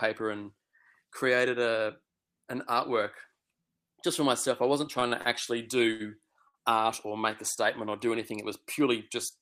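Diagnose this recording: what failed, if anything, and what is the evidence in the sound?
The network is the culprit: short stalls from late packets at 4.99, 5.08, 5.21, 5.92 and 6.48 s. Each time the jitter buffer runs dry, the speech holds its last sound for 24 to 72 ms, then resumes right where it stopped. Nothing's lost, just stretched and pushed later.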